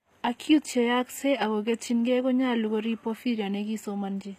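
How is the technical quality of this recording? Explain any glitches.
Technical quality is limited by audible codec damage throughout the speech. The likely cause is HE-AAC compression: the treble above the coded band is rebuilt from copied lower bands, so sibilants sound gritty and metallic, nothing exists above 15.5 kHz, and the degradation fits a bitrate around 24 kbps.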